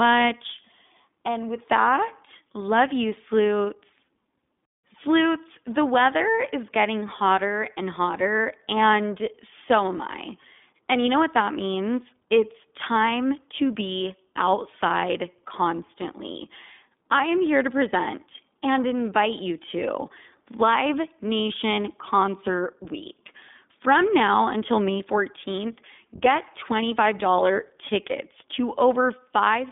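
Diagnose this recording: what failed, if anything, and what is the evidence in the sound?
Codec stage: iLBC codec damage throughout, with rough, synthetic speech and a hard spectrogram ceiling near 3.7 kHz, from independently coded 20 ms frames.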